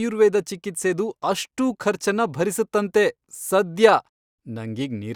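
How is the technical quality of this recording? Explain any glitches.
Listening to this speech recording, nothing stood out as a glitch or technical problem.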